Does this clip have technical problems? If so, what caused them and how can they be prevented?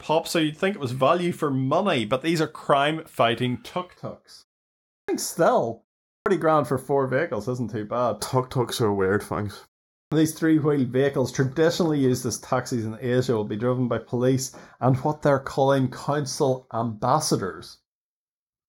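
Yes. From 3.96 s to the end, the speech takes on a hollow, slightly phasey quality, as if heard through a tube. This is channel delay causing comb filtering: one channel runs late by roughly 0.2 ms, and when the two are summed to mono the shared sound cancels at evenly spaced frequencies, with the first notch somewhere around 3 kHz and further notches above it, carving fixed gaps into the upper spectrum. To prevent it, keep both channels sample-aligned through the signal chain, or take a single channel rather than summing a mismatched pair.

There are also three clipped starts after a pause, at 4.99 s, 6.15 s and 10.01 s. Each time, speech resumes abruptly out of silence with its opening sounds missing, about 95 ms, 109 ms and 106 ms respectively, following pauses of 0.63 s, 0.39 s and 0.41 s. The output device drops into an idle state during the short silence and needs time to wake and lock again, so the first slice of sound is swallowed before it is ready. 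To prevent it, disable the device's power-saving or idle sleep, or keep a low continuous signal running so it never goes idle.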